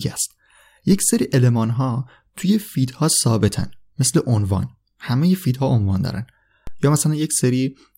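A low thump cuts under the speech at 0.92, 3.60 and 6.67 s. Each is a DC step: the waveform's zero line jumps by about -22 dBFS (about -20 dBFS the last time), then drains away slowly through a roughly 2 Hz high-pass.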